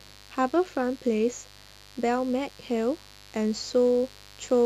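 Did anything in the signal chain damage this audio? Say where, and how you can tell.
Yes. Mains buzz was picked up in the analogue wiring: a steady, raspy buzz runs beneath the speech from start to finish, roughly 25 dB down. On a spectrogram it shows as evenly spaced horizontal lines at 50 Hz harmonics reaching several kHz. On the waveform it appears as sharp switching spikes repeating 100 times per second.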